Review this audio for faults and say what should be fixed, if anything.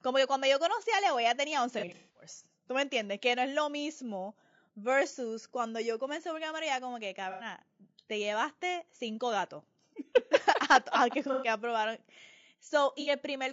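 Throughout, the speech sounds rough and grainy, with noise filling the gaps between harmonics. This is likely low-delay AAC compression (AAC-ELD) at a rate around 32 kbps, whose short frames resolve pitch poorly. Unlike the dropouts, it never lets up. Raising the bitrate or using a longer-frame codec would prevent it.

AAC frame loss with concealment appears as smeared, noisy patches where the decoder fills in from the last good spectrum. They occur at 1.79–2.27 s after "ella tenía" (about 270 ms lost, longest run roughly 200 ms), at 7.31–7.45 s after "como que", at 11.33–11.47 s, and at 13.01–13.10 s. These are brief local events rather than a constant texture. Forward error correction or a larger jitter buffer would prevent them.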